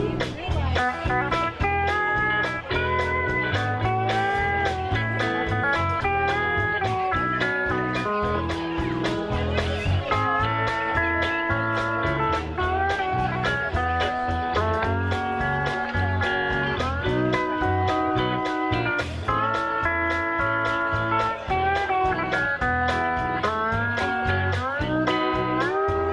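Nothing goes wrong anywhere in the clip; there's no point where the audio drops out, stumbles or breaks up.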